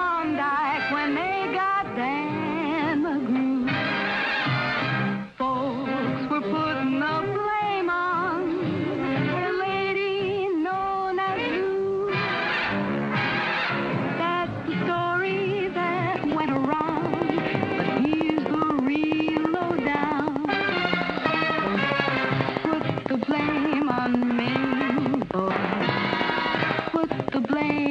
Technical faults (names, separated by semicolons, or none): train of clicks